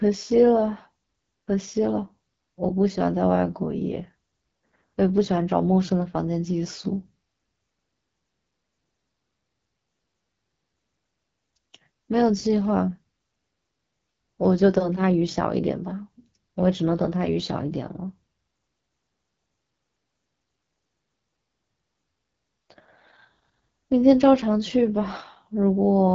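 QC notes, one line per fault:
Throughout: AMR wideband (HD Voice) codec. The speech is rough and raspy, which fits a low rate of about 8.85 kbit/s, one of the codec's two lowest. The pulse-driven vocal tract model models speech only up to 6.4 kHz, and above that the top band is shaped noise. On a spectrogram, harmonics look smeared and grainy, with a noisy band above 6.4 kHz and nothing above 7.5 kHz.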